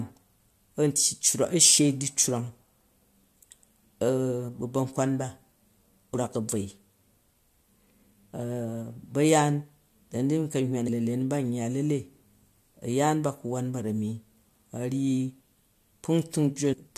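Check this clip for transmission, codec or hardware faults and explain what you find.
Two faults of one kind are audible in the speech.

Compressed frames skipped occur at 10.87 s and at 16.72 to 16.74 s. Whole frames of the encoded stream were lost or rejected by the decoder. The jump in the audio points to a frame length of 23.2 ms: about ten frames, or around 200 ms, at the first point and about five frames, or around 100 ms, at the second.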